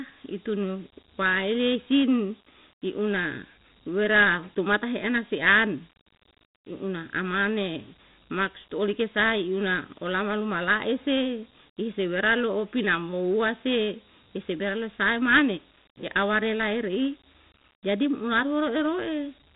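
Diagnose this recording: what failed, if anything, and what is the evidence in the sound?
The codec stage failed: Dialogic VOX ADPCM damage runs throughout the speech. Nothing sounds above 3.9 kHz, and a plainly audible gritty hiss follows each phrase, which fits 4-bit ADPCM at 8,000 samples a second, about 32 kbps. A plain low-pass filter would narrow the band without that hiss.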